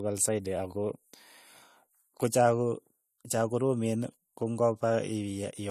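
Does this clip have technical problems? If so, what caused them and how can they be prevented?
Yes. Transcoding between lossy codecs runs through the whole clip: nothing sits above 14.1 kHz, and the speech carries layered artefacts from both codecs heard together. The likely cause is a chain of two codecs, with the sound pointing to an MP3 near 96 kbit/s re-encoded as AAC-LC at around 48 kbit/s. The second encoder spent its small budget on the first one's damage and added its own, keeping the lower cut-off. Encoding once, from the original uncompressed source, prevents this.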